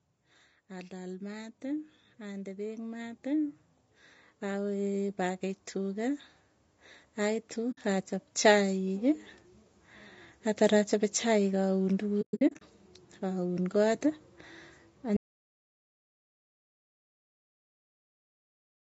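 Throughout, the speech sounds rough and grainy, with a hiss-like fill between the harmonics and a thin, synthetic top end that stops at 8 kHz. That limit comes from the call's microphone processing. The graininess is the mark of low-delay AAC compression, likely AAC-ELD at a rate around 32 kbps. Its short frames resolve pitch harmonics poorly and leave too few bits to fill the spectrum cleanly.

Three times the level swells slowly, with voice and background rising together. It climbs by about 6 dB from 0.68 to 3.61 s, by about 4 dB from 4.41 to 6.27 s, and by about 4 dB again from 7.16 to 9.3 s. This is automatic gain rising: the gain control judged the input too quiet and kept turning it up gradually rather than in a step.

At 7.71 to 7.78 s there is a soft-edged hole of about 60 ms. From 12.21 to 12.62 s a cluster of similar holes totalling about 280 ms breaks up the sound over roughly 400 ms, the longest lasting around a tenth of a second. 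This is AAC frame loss with muting. The decoder zeroed the missing frames, and its overlapping windows fade the sound out and back in at each edge. The gaps fit frames of about 20 ms.

At 15.17 s the sound cuts off mid-flow into complete silence, with no room tone, and it stays silent to the end of the clip. This audio dropout to silence most likely came from the input being lost, so that the recorder kept writing silence. Whatever followed is gone.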